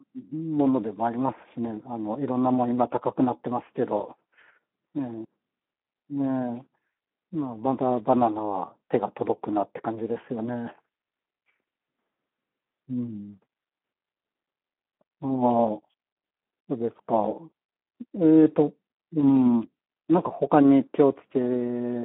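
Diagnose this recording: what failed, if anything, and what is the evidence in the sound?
The failure is at the codec stage: Speex damage runs through the whole clip. The speech sounds hoarse and noisy because the CELP excitation is starved, which fits a rate near 11 kbps. A spectrogram shows telephone-band energy from 200 Hz to 3.4 kHz and nothing above 3.8 kHz.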